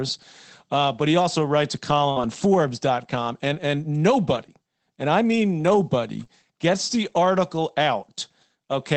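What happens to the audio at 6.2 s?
At 6.20 to 6.22 s there is a lost packet rebuilt from error correction. One 20 ms packet went missing. The following packet carried a low-bitrate spare copy, and the decoder played it. There is no gap, but that stretch sounds rougher and noisier.

Right after, from 6.24 to 6.27 s, comes a short concealed packet loss, between "and I mean nobody" and "gets the article". About 20 ms never arrived in time. The receiver extended the preceding sound to fill the hole, then blended back, leaving a brief smear or wobble.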